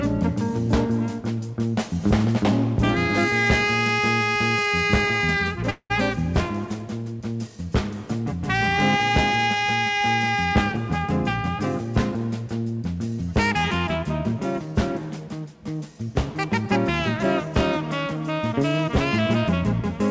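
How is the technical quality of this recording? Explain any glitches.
One glitch stands out: a break in the sound from 5.70 to 5.92 s, heard through a call path whose G.722 coding leaves nothing above 8 kHz. At that point the last sound carries on as a fading buzzy smear for roughly 0.2 s, a short silence of about 60 ms follows, and the audio resumes with about 200 ms missing. This is likely a long network dropout, where packets stop arriving, the receiver extrapolates the final sound to cover the gap, then gives up and mutes before the stream returns.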